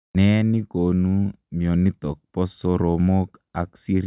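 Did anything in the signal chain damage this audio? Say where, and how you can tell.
No, nothing damaged this audio.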